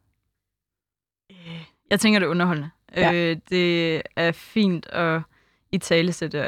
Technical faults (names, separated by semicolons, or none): sample clock jitter